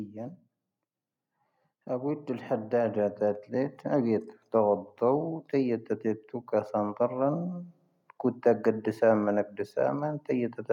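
From 1.86 s to 3.82 s the level climbs steadily by about 6 dB, a case of automatic gain rising. The automatic gain control judged the incoming speech too quiet and increased its gain gradually over roughly two seconds instead of stepping it. Because the gain acts on the whole signal, the voice and the background noise swell together, so the room tone grows along with the speech rather than the speech alone getting louder.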